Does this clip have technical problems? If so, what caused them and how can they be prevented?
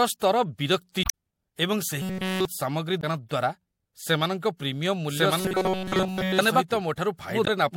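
Yes, three kinds of fault are audible in this speech clip.

Damaged data in a compressed stream shows up as short chirps and blips at 1.02 to 1.10 s, 3.00 to 3.04 s and 7.44 to 7.48 s. At each point the decoder hits corrupted or missing bytes, cannot read the frames there, loses sync and resumes at the next valid frame header. Protecting the stream with checksums or a reliable transport, and keeping metadata out of the audio payload, prevents this.

Robotic sound from repeated short buffers turns the speech into a rigid, metallic buzz at 188 Hz from 2.02 to 2.45 s and again from 5.39 to 6.39 s. The speech's rough shape survives. The likely cause is audio arriving too late, so the software keeps replaying a segment of about 5.3 ms. Essentially all of the sound in those stretches is repeats, with the real audio skipped. Larger jitter buffers and a steadier network or CPU path prevent it.

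A doubled audio track starts abruptly at 5.09 s and runs to the end. A full-band copy trails about one second behind and is roughly as loud as the original, with no decay or room colour. This likely comes from the same audio being mixed in twice through a second, slower capture path. Monitoring routing so each source enters the mix only once prevents it.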